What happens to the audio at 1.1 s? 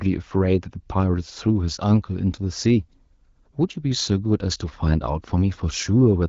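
Nothing goes wrong at 1.1 s: the speech there carries through the AMR wideband (HD Voice) codec at 12.65 kbit/s with no dropout, glitch or other fault.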